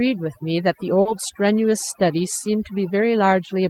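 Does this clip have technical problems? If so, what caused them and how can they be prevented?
Yes. Throughout the speech, the background drops and breaks up into twinkling specks. That is overdone noise removal: a noise reduction stage set far too aggressively clamps individual frequency bands down or shuts them off whenever they sit close to its noise estimate, so the quieter parts of the voice are stripped away along with the hiss. Keeping the reduction amount moderate, or capturing cleaner audio in the first place, prevents this.

Between 1.01 and 1.07 s there is a brief smear where the sound wobbles rather than carrying on cleanly. This is short concealed packet loss: about 40 ms of the stream failed to arrive in time, and the receiver covered the gap by extending the preceding sound, following its pitch if it was voiced or using shaped noise if not, before blending back into the real signal. 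A steadier network path with a larger jitter buffer would keep those packets from arriving too late.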